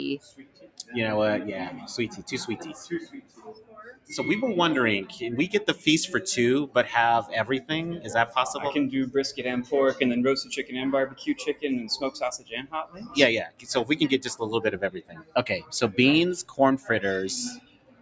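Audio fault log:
Throughout: noise suppressor applied to music or sounds. A speech-oriented suppressor stayed on and keeps treating the steady, sustained parts as noise, so the level swings by around 15 dB. Onsets punch through while held material and tails sag, giving a pumping, thinned-out feel.
0.18–0.94 s, 1.8–4.11 s, 7.61–8.35 s, 10.5–13.94 s, 14.85–15.72 s, 16.43–16.89 s, 17.55–18.01 s: sound cut by the noise suppressor. In each stretch the sustained sound gets pushed down by about 16 to 18 dB at its deepest, so decays die early and held sound drops away. The longer dips around 1.8–4.11 s and 10.5–13.94 s are the longest.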